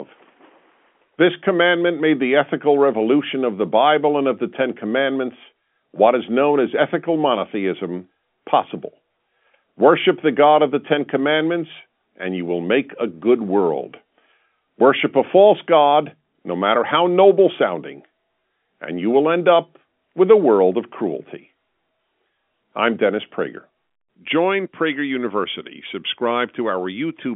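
No technical faults can be heard in the audio. The G.711 telephone coding is audible as a narrow line band running from about 200 Hz to 3.4 kHz, with nothing reaching above 4 kHz.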